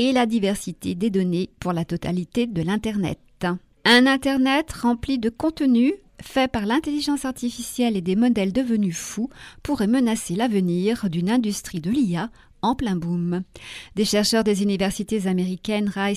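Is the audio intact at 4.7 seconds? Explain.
Yes, at 4.7 seconds the audio runs through cleanly, with no dropout, click, gap or other fault at that point.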